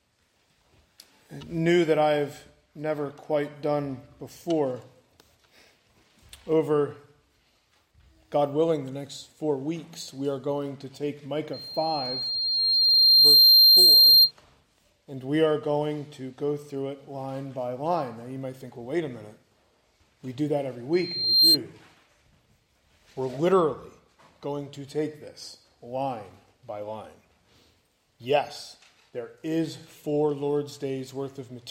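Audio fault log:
11.53–14.32 s and 20.93–21.57 s, loudspeaker feedback squeal: a 4.2 kHz tone swells over about two seconds, then about half a second, to roughly 15 and 10 dB above the audio, as the microphone re-amplifies its own loudspeaker output at that frequency with loop gain above unity.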